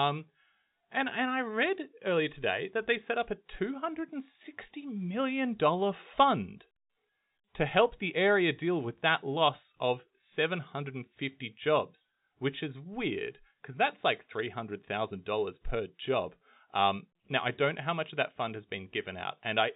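No faults detected: the speech runs through a G.711 telephone path with no content above about 3.8 kHz and at most a faint level-tracking noise floor.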